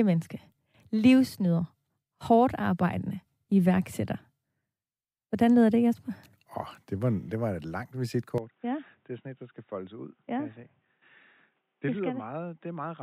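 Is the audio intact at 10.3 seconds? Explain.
No. At 10.3 s the clip is inside a stretch, running from 8.38 s to the end, where the input has likely switched to a poorer device. Right after "det var et langt" the sound changes with no gap: nothing is left above 3.8 kHz, so it turns dull and boxy, it drops by about 10 dB, and a faint new background noise appears about 45 dB below it. A narrower-band microphone or headset call profile would produce exactly this change.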